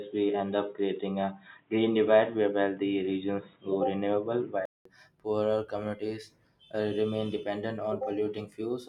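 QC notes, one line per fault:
0.00–4.85 s, input switched to a poorer device: likely a narrowband input, leaving speech dull above 3.8 kHz, with faint new background noise and a 0.2 s gap at the switch.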